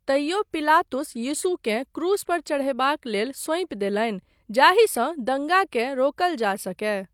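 No technical faults can be heard anywhere in the recording, and the signal stays continuous and intact throughout.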